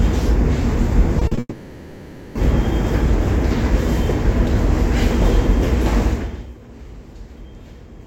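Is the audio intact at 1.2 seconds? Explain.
No. From 1.19 to 1.23 s there is a brief smear, with a second one at 1.27 to 1.33 s. This is short concealed packet loss: 20 ms, then 40 ms, never arrived and were filled by extending the preceding sound.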